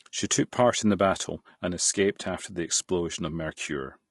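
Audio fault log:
throughout: low-delay AAC compression. The speech sounds rough and grainy, with noise filling the gaps between pitch harmonics and a thin, artificial top band. This is likely AAC-ELD, whose short frames resolve harmonics poorly; the damage fits a bitrate around 32 kbps.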